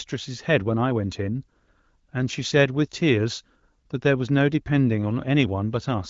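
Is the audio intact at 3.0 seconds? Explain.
Yes, the audio is intact at 3.0 seconds, with no fault at that moment.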